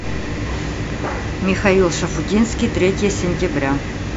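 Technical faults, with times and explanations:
No technical faults detected anywhere in this speech recording.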